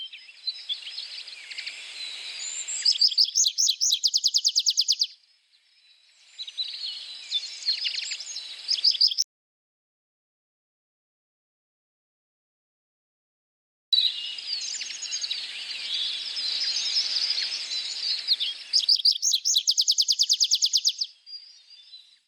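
An audio dropout to silence from 9.22 to 13.93 s leaves a flat waveform and blank spectrogram without room tone, likely from a disconnected device, failed link or mute.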